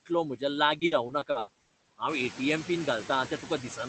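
Speech, run through a noise suppressor that pulls steady background down by about 17 dB throughout. These noise suppressor artifacts show on a spectrogram as a noise floor that drops away between phrases and fills back in under the speech, with the leftover noise breaking into flickering, patchy specks. The room noise rises around 2 s, and even then stays well under the speech. From 0.79 to 1.71 s, just before "हांव ए टी एम", repeated packet loss (robotic sound) makes the audio choppy. Short holes, the longest 80 ms, are each patched by continuing the previous sound, so about a third of that stretch is concealed rather than real. The waveform shows oddly smooth, repeating segments, and the spectrogram shows smeared, frozen-looking harmonic blocks where the detail should keep changing. Content stops near 8 kHz, which fits an Opus call path at a low bitrate.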